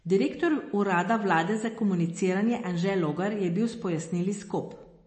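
From start to finish the speech carries the sound of heavy MP3 compression, likely the cause of its watery quality. Nothing is present above 8.3 kHz, where the encoder has cut the treble to save bits, and the plainly audible swirling comes from weak frequency components switching on and off between frames. Consonant onsets smear, and the overall damage fits a low bitrate of around 32 kbps.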